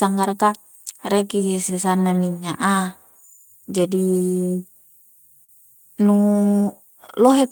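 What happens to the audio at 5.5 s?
From 5.44 to 5.51 s there is a short stall from a late packet. A speech packet arrived late and the jitter buffer ran dry. The receiver stretched the last sound by about 42 ms, then resumed where it stopped. Nothing is lost. The sound briefly holds with a slight buzz or dip.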